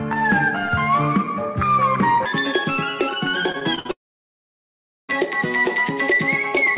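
From 2.26 s to the end, this section was likely played against the wrong clock at 1.87 times its recorded speed, so the sound turns hurried and close to an octave higher. Between 3.52 and 3.91 s, repeated packet loss strikes. Several short holes, the longest 58 ms, are each patched by stretching the last sound, leaving choppy, robotic fragments across about a third of that span. From 3.91 to 5.11 s, a long network dropout likely cuts off arrival altogether. A brief fading buzz or hiss gives way to roughly a second of silence, and the sound resumes with that stretch missing. Throughout, the band-limited G.711 call path carries nothing above 4 kHz.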